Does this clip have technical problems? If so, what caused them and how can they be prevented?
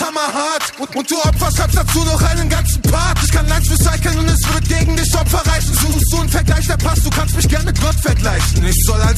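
Yes. At 5.92 to 5.99 s the sound stutters, a roughly 70 ms slice playing twice in a row. This is repeated frames: a short run of compressed frames, about three judging by the length, was written or sent twice, so the decoder played it again and the clip gained about 70 ms. Checking frame sequence numbers or timestamps when writing or receiving the stream, and dropping duplicates, prevents it.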